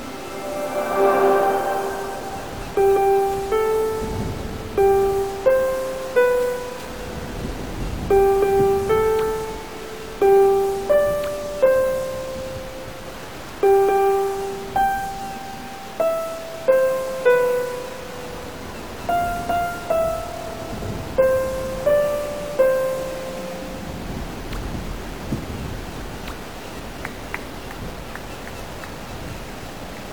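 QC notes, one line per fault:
Throughout: stuck bit. The audio carries distortion from start to finish. It follows the waveform and does not come and go. Quiet passages fill with a constant noise rather than falling to silence. This is likely a single data bit held at a fixed value, from a broken line or converter. About half the sample values then land wrong by that bit's weight. Low-level sound flips sign often, so the error shows up even in the pauses.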